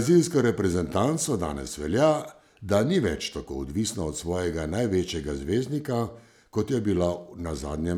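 A speech recording, and nothing technically wrong can be heard in it. There are no faults to give times or causes for.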